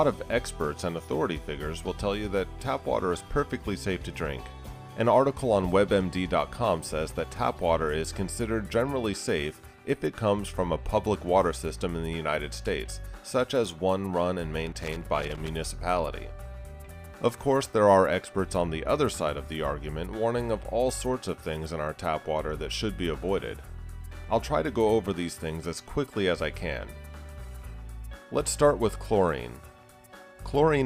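Loose connector crackle appears twice, first from 14.67 to 15.49 s, a burst of about 0.8 s, then from 24.12 to 24.24 s, a shorter one of about 0.13 s. A worn or dirty contact somewhere in the signal path was making and breaking contact quickly as it shifted, chopping the audio on and off many times within each burst. The result breaks through the sound as an irregular run of crackling or scratching.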